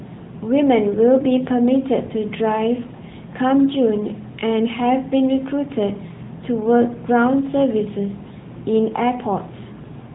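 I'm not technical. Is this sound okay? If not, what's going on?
No, not quite. For the whole clip, the speech has been squeezed through the AMR narrowband mobile codec, the same kind of compression old mobile phone calls used. It throws away everything above about 3.8 kHz, so the voice sounds boxed-in and dull, like it's coming down a phone line. It also rebuilds the voice from a simplified model of the throat and mouth, which gives it a clearly buzzy, synthetic edge.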